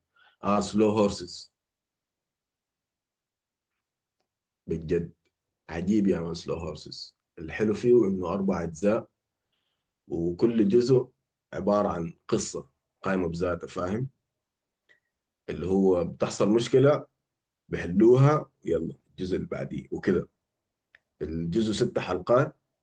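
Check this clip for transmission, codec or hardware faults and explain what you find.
Two brief glitches are audible, both short concealed packet loss. At 0.53 to 0.57 s and again at 8.79 to 8.83 s the speech smears into a momentary wobble. In each case about 20 ms of audio failed to reach the decoder in time, and the receiver papered over the gap by extending the preceding sound before blending back into the real signal.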